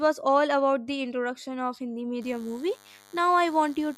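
From 2.22 s to the end, a thin, steady buzz sits well under the speech: DECT cordless phone buzz, from a nearby handset or base sending radio bursts every 10 ms that the audio circuitry rectifies. Its 100 Hz rate and dense harmonics separate it from smoother 50 or 60 Hz mains hum.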